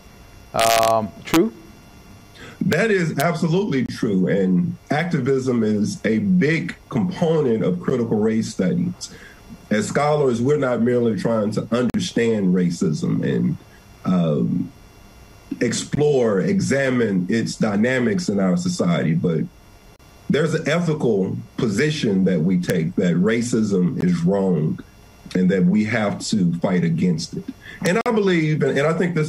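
Integer overflow cracks the peaks at 0.60 to 0.90 s, 1.34 s, 2.73 s and 3.20 s, and again at 22.70 and 27.86 s. With overload of only about 0 to 2 dB, peaks passing the integer limit wrap to the opposite sign. Each one jumps across the full range, producing a sharp crack rather than the flattened, duller distortion of clipping.

Gaps between stream segments appear at 3.86, 7.90, 11.90, 15.95, 19.96, 24.01 and 28.01 s. They fall every 4 s, matching 4-second segments whose time stamps leave holes of 12 to 47 ms. Silence fills each hole with hard edges. Unlike a dropout, no audio is lost; the sound resumes where it stopped.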